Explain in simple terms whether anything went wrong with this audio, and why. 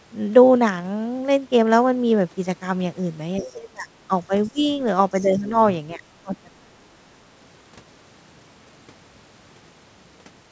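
Something did go wrong, and it happens twice over in this speech clip.

The first fault is the other side's voice leaking through. The talker's device was playing the far end on a loudspeaker, and the echo canceller, which should strip that sound out of the microphone, likely missed some of it. A faint second voice slips in behind the talker in short scraps, at 3.37 to 3.55 s, 4.43 to 4.66 s and 5.23 to 5.50 s. It stays well below the main speech.

The second fault is speech suppressed in double talk. When both people spoke at once, the echo canceller likely couldn't tell its own talker apart from the loudspeaker echo, so it turned everything down together. The talker's voice sinks sharply, almost vanishing at its worst, from 3.39 to 4.66 s, dips only mildly from 5.21 to 5.53 s, and sinks deeply again from 5.95 to 7.19 s. For about a second of that last stretch, the voice is noticeably held down.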